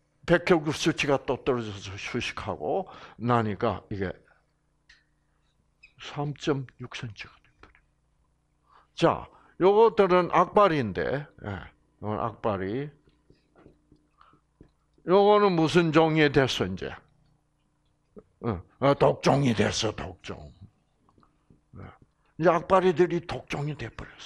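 Nothing here stands out as a technical problem; the audio just runs along without any fault that a listener would notice.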